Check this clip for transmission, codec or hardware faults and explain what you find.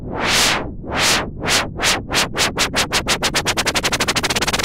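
No faults can be heard anywhere in this recording.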